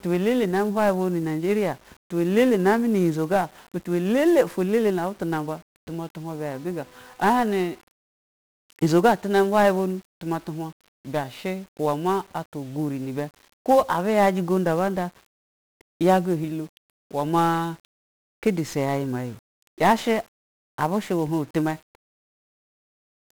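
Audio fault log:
Throughout: 1-bit DFPWM compression. Each speech sample is reduced to a single up-or-down step of an adaptive level, so heavy broadband quantisation noise rides on everything. The result is fuzzy and crackly, with treble buried under hiss, consistent with roughly a 48 kbps DFPWM stream.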